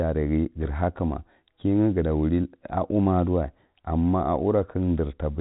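No technical faults are audible.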